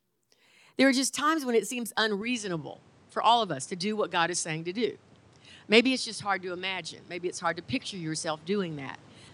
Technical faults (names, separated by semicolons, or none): input switched to a poorer device